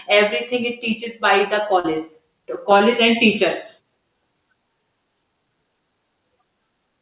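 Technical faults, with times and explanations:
1.04–1.08 s, 1.80–1.86 s and 2.78–2.82 s, short concealed packet loss: three brief smears where the speech wobbles and a short consonant can blur away. About 20 ms, 40 ms and 20 ms of audio arrived too late for the decoder. The receiver bridged each gap by extending the preceding sound, pitched if voiced and as shaped noise if not, then crossfaded back into the real signal. This happens over a narrowband call path capped at 4 kHz, which fits G.711 A-law.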